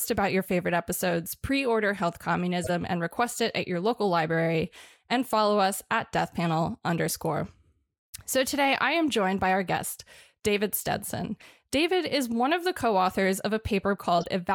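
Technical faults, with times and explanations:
2.64–2.70 s, corrupt frame decoded: a short squeaky blip just before "and request it at". Damaged bits in the compressed stream were decoded as if valid, so misread gains and codes put energy in the wrong frequency bands for about two frames, peaking near -20 dBFS.
14.18–14.26 s, corrupt frame decoded: a longer, louder chirp near the end, closer to -15 dBFS. The same misdecoding runs across roughly five consecutive frames, stretching the burst of misplaced energy.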